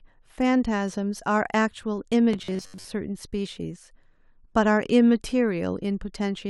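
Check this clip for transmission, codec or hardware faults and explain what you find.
One fault is present, in the speech between 2.33 and 2.87 s. Robotic sound from repeated short buffers: for that half second the audio takes on a fixed buzz at 93.8 Hz, which matches a repeat period of about 10.7 ms. The likely cause is new audio arriving too slowly, so playback keeps looping a short fragment, repeating most of the stretch instead of playing the real signal. The result is a hard, metallic drone that still loosely follows the speech's rhythm.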